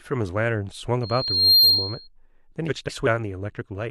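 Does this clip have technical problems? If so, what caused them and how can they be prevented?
Yes. From 1.03 to 2.08 s there is a loudspeaker feedback squeal. The microphone picks up its own loudspeaker, and the loop gain exceeds one at 4.2 kHz. That tone swells over about half a second to roughly 10 dB above the speech. To prevent it, lower the monitor gain, move the microphone away from the speaker, or notch out 4.2 kHz.

From 2.68 to 3.07 s the frames play out of order. Two neighbouring blocks of about 186 ms each, consistent with runs of a few frames, come out swapped. The result is a garbled flutter, and no time is lost. To prevent it, use a transport or buffer that reorders packets by sequence number before decoding.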